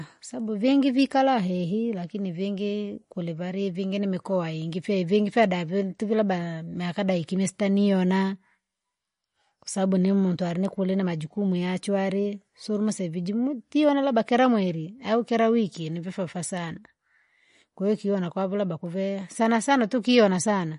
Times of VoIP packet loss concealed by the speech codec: none

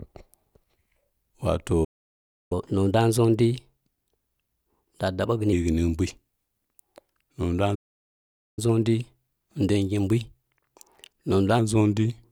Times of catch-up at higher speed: 2.52-5.52, 8.59-11.59

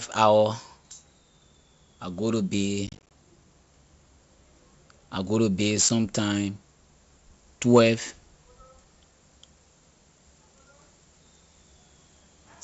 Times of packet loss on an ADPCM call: 2.87-3.12, 5.89

